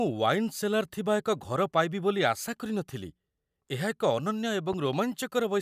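Loud pop, 4.73 to 4.96 s: two sharp pops, peaking a few dB above the speech, which continues underneath, likely from a sudden voltage pulse such as a plug or switch.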